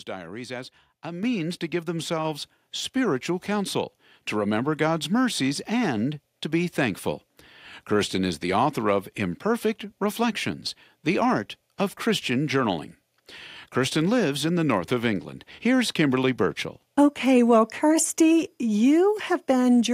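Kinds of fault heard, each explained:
Microphone volume stepped up: the call software judged the microphone input too quiet and raised the device's input volume in a single jump rather than a gradual ramp. Because the change happens before any processing, the speech and the background noise rise together, by about 7 dB, at 1.23 s. It falls mid-phrase, between "diaries as a" and "to give", so the level lurches upward abruptly and stays higher from that point on.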